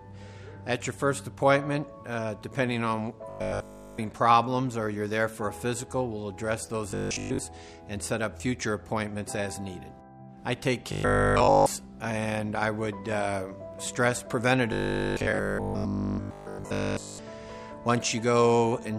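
A rigid, metallic buzz at 50 Hz replaces the sound from 3.30 to 4.00 s, for most of 6.91 to 7.39 s, from 10.92 to 11.66 s, and through the longest stretch, 14.73 to 17.19 s, while still loosely following its contour. This is robotic sound from repeated short buffers, likely caused by new audio arriving too slowly. Playback loops the last fragment instead, which fits a 20 ms buffer, and skips the real material.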